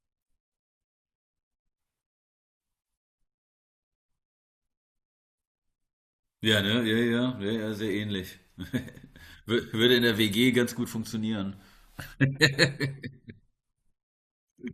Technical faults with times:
none

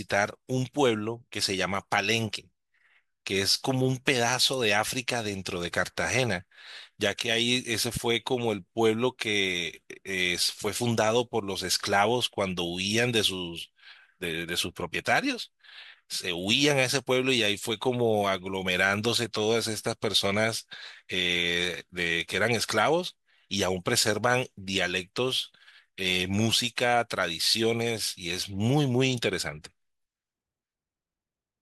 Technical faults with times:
none

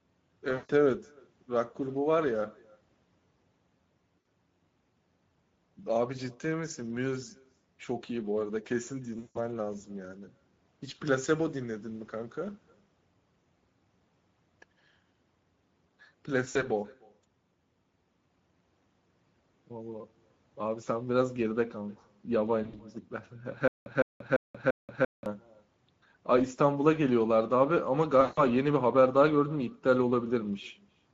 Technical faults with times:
0.00-31.14 echo with no canceller
0.00-31.14 Speex codec
0.53-0.71 VoIP packet loss concealed by the speech codec
4.19-4.25 VoIP packet loss concealed by the speech codec
9.19-9.38 VoIP packet loss concealed by the speech codec
16.49-16.64 VoIP packet loss concealed by the speech codec
22.63-22.82 VoIP packet loss concealed by the speech codec
23.68-25.26 stutter with silent gaps
28.21-28.41 VoIP packet loss concealed by the speech codec

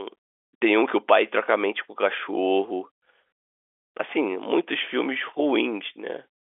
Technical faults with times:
none

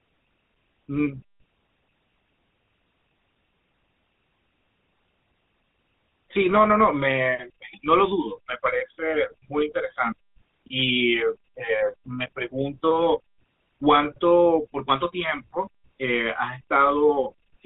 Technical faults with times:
0.00-17.65 GSM full-rate codec

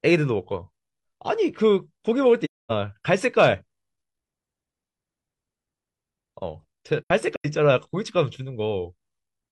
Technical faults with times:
2.44-2.71 AAC frame loss with muting
7.01-7.46 AAC frame loss with muting

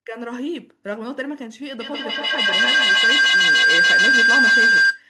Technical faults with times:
1.80-5.09 feedback howl

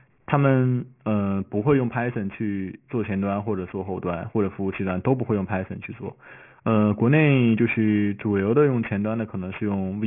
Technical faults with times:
0.00-10.07 aliasing

